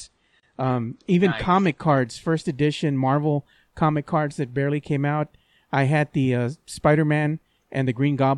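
Adaptive stream starting at a low bitrate, 0 to 2.0 s: the player opens on a thin version with nothing above 9.7 kHz, then jumps gaplessly to fuller sound before "first edition".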